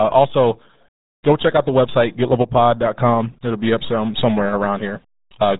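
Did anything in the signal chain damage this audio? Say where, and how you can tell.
Yes, it's the codec stage: RealAudio 14.4 damage runs through the whole speech clip. Nothing gets through above 3.8 kHz, and the heavy gargly, muffled texture fits RealAudio 1 squeezing speech into roughly 8 kbit/s for dial-up, which discards everything that low rate can't carry.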